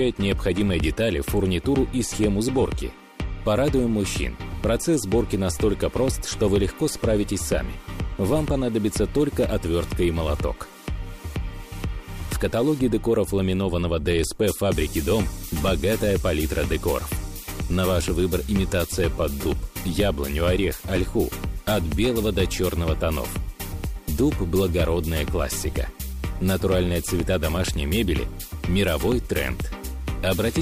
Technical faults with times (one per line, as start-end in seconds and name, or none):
24.50-30.62 sample clock jitter